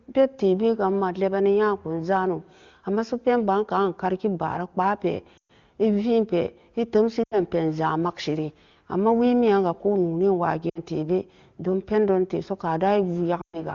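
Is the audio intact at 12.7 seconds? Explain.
Yes, the audio is intact at 12.7 seconds, with the speech carried cleanly through the AMR wideband (HD Voice) codec at its top rate of about 24 kbit/s.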